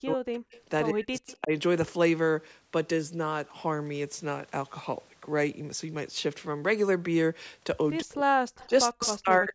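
The speech sinks almost to silence from 0.0 to 0.53 s. This is speech suppressed in double talk. The echo canceller likely turned down both talkers at once. An echo leak follows at 0.53 s. A faint copy of the voice returns about 106 ms late. It likely comes from a loudspeaker path the canceller missed. Suppression returns from 0.91 to 1.53 s. Within it, at 1.27 s, a faint echo trails by 107 ms. From 8.01 to 8.36 s the speech drops away again. An echo leak at 8.56 s lags by 116 ms. A final suppression runs from 8.67 s to the end. Inside it, at 9.04 s, the clearest echo arrives 117 ms late.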